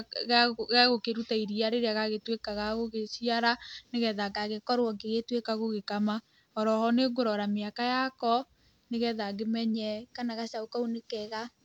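From 4.31 to 5.40 s, and again from 9.74 s to the end, the speech abruptly runs 6.3% faster and sits 105 cents sharp, about a semitone; the first step snaps back at 5.40 s. This is a drift correction step, likely clock-matching software jumping its playback rate to rebalance a buffer. On a spectrogram the harmonic ladder shifts upward as a block, and on the waveform the cycles are compressed.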